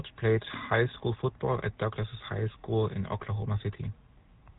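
Throughout the speech, the GSM full-rate codec is plainly audible. The voice has a buzzy, gravelly roughness. The codec rebuilds speech from a vocal-tract model fed with coarse pulses. Nothing above 3.8 kHz survives. That fits a 13 kbps GSM full-rate stream.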